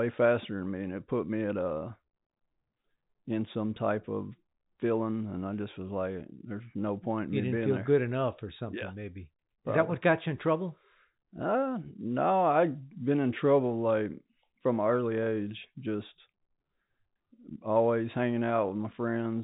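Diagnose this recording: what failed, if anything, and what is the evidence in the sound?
Nothing failed; no faults heard.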